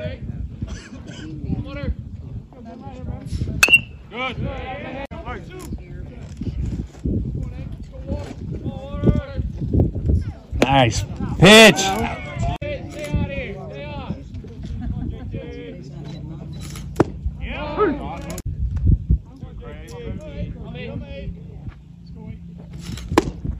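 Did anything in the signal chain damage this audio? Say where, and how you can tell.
Yes. Hard clipping occurs at 3.63–3.75 s, 9.80 s, 10.62–10.83 s, 11.43–11.70 s and 23.18 s. Peaks overran a converter or fixed-point format by up to about 15 dB. The flattened tops add crackly upper harmonics, harshest at 3.63 s and faint at 9.80 s.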